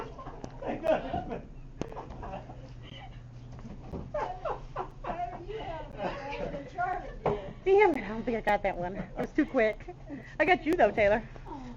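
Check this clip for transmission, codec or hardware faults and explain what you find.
Two faults are present: silent holes between stream segments in the first eight seconds, then regular driver-style dropouts near the end.

A gap between stream segments occurs at 0.87, 1.89, 2.90, 3.92, 4.91, 5.92, 6.93 and 7.94 s, once per 1.0 s segment. Segment timestamps leave small spaces that playback pads with silence, giving hard-edged holes of 4.5 to 16.8 ms with no audio lost.

Periodic USB or driver dropouts run from 8.49 to 11.47 s, every 0.249 s. A blocked bus or driver skips roughly a millisecond of audio each time, about fifteen times, producing evenly spaced ticks wherever sound is present.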